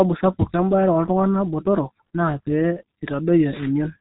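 Muffled, hoarse speech runs from start to finish, with consonants smeared together and nothing above 3.8 kHz, so sibilants and crisp edges are missing. This is heavy G.723.1 codec damage. The coder squeezes speech into a very low bitrate, which here fits roughly 6.3 kbit/s, and updates its model of the voice only once per 30 ms frame. Fast changes between sounds blur, and the roughness comes from the coarse coding.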